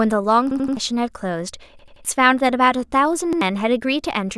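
Stutters at 0.51 to 0.77 s and 1.79 to 2.05 s repeat an 85 ms piece four times with hard joins. At 3.33 to 3.41 s one piece plays twice. Each is a repeated buffer: audio arrived late, so the last block, which fits a 2048-sample buffer, replayed. About a third of a second of new speech is lost at each long stutter and around a tenth at the short one.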